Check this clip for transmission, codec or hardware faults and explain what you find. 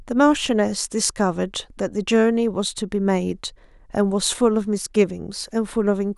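Nothing found: no transmission, codec or hardware fault is audible anywhere in the speech.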